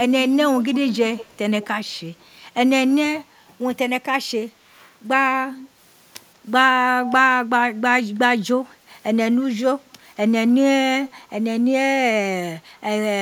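Speech with an echo leak: faint, delayed copies trail the talker by 176 ms, later 193 and 222 ms, at 0.59–0.98, 1.14–1.38, 1.61–1.67, 2.2–2.24, 5.51–5.69, 7.04–7.13 and 11.06–11.22 s. They are likely sound from a far-end loudspeaker that the echo canceller failed to remove. A spectrogram shows weak, time-shifted ghost harmonics, and the waveform shows small trailing bumps.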